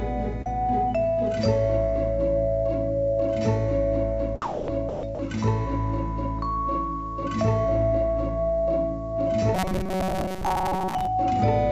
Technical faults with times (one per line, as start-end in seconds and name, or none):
0.42-0.47 short concealed packet loss
4.42-5.19 sound dropped by the voice detector
9.55-11.09 robotic sound from repeated short buffers